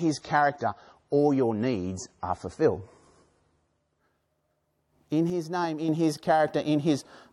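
For the first 4.0 s the speech sounds dull and swirly, with nothing above 10.5 kHz, then brightens abruptly without a gap: an adaptive stream starting at a low bitrate, consistent with roughly 32 kbit/s MP3 stepping up to 128 kbit/s.

From 5.30 to 5.89 s the speech and background noise drop together by about 7 dB, then snap back, likely a sudden gain jump applied without a ramp.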